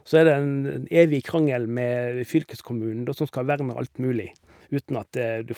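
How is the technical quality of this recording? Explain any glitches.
Nothing faulty can be heard anywhere in this recording.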